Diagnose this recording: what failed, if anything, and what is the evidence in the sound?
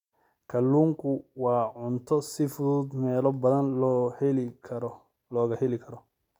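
Nothing failed; no fault is audible in this speech.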